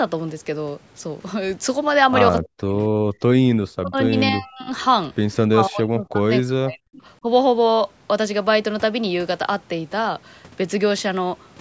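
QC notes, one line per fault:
2.44–2.73 s, 3.50–4.15 s, 4.32–4.70 s, 5.47–7.02 s and 7.22–7.26 s: speech suppressed in double talk. The speech sinks by up to roughly 40 dB, longest from 5.47 s, last only a dip of about 10 dB. This is likely an echo canceller turning everything down while both ends talked, since it could not separate the near talker from loudspeaker echo.
3.01–3.22 s: background gated by the echo canceller. The room sound drops by about 32 dB for roughly a fifth of a second, then comes back. The canceller cut the microphone hard while the loudspeaker played and then let go.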